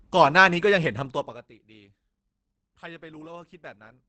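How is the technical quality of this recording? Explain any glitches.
Technical quality is limited by a single fault that runs through the whole clip: Opus compression, plainly audible from start to finish. The speech sounds muffled and hoarse, and nothing is present above about 8.5 kHz. That cut-off and the hoarse texture point to the Opus codec's speech mode, SILK, running in wideband. It models the voice rather than every band, and drops the top of the spectrum. This is likely the result of a low bitrate, in the region of 16 kbps.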